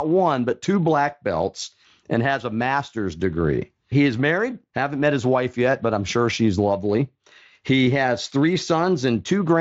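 No technical faults are audible.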